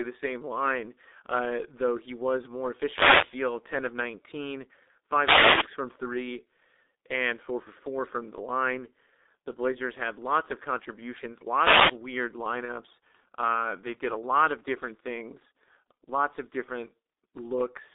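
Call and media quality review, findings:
G.723.1 codec, whole clip: speech muffled and hoarse, consonants blurred, heavy damage. Band roughly 250 Hz to 3.7 kHz, fits the 6.3 kbit/s mode. 30 ms frames, slowly updated voice model smear transitions.

Wireless microphone noise hits at 2.64–3.57 s, 5.18–5.72 s, 11.56–11.99 s: bursts of static swishing over the speech. Analogue FM radio link fading as reflections cancel, receiver noise rising. Broadband hiss, not tonal, sets these apart from codec concealment.

VoIP packet loss concealed by the speech codec, 12.65–12.74 s: brief stretched, fading smear, speech weak just after. Points to one lost 30 ms frame, decoder extrapolating last pitch and filter with falling gain. Extrapolated sound rather than static, unlike the radio hits.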